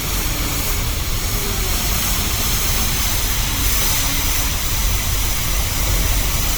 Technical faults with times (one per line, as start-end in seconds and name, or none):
0.00-6.58 generation loss